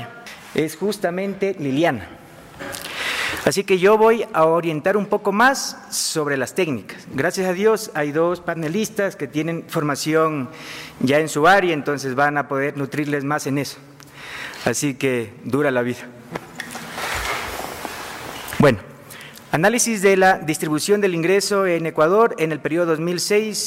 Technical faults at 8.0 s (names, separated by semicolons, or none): none